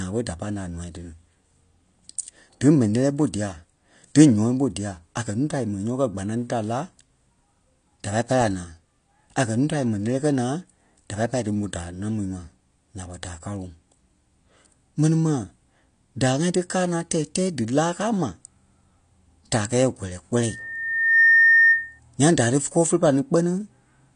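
Loudspeaker feedback squeal interrupts this speech recording from 20.41 to 22.00 s: a single 1.8 kHz tone swells over well under a second to roughly 10 dB above the talker, as microphone pickup of the loudspeaker reinforces that one frequency on every pass around the loop. AAC compression is the likely cause of the dull, smeared texture heard throughout. Nothing is present above 9.8 kHz, and plainly audible warbling and fizz on sibilants fit a low bitrate around 32 kbps, where coarse quantisation leaves spectral holes.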